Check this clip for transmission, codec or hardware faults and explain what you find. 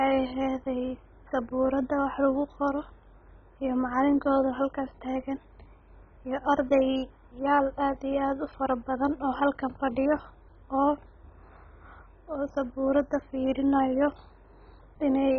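One fault runs through the whole recording: speech with MP2 compression damage, heavy throughout. Nothing is present above 6.8 kHz, and the sound is dull with a gurgling, granular texture. This is likely an MPEG Layer II encode at a very low rate, which fits about 16 kbps, switching off upper sub-bands and coarsely quantising the remainder.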